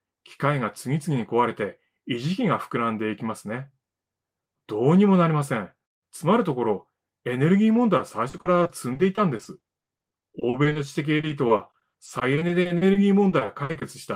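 Around 7.97 s the sound turns choppy, which is classic repeated packet loss. Packets keep going missing, and each hole gets patched by stretching the last bit of audio, so you hear a choppy stutter. It runs to 10.77 s, with about a fifth of that stretch papered over and no gap longer than 40 ms. After a brief clean patch it returns from 11.17 s to 13.83 s, a little worse, with concealed gaps up to 60 ms.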